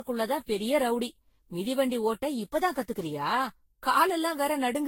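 Throughout the speech the sound is swirly, smeared and hollow, with blurred consonant attacks and nothing above 16.6 kHz. The likely cause is generation loss, consistent with around fifteen Vorbis re-encodes near 60 kbit/s, each requantising on a shifted frame grid.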